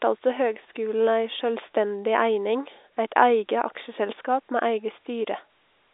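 This is a speech clip, and nothing is technically wrong with it.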